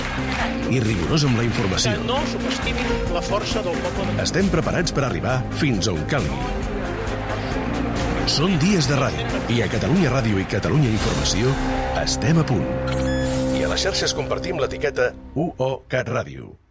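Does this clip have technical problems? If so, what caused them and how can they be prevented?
No, there are no technical problems in this clip.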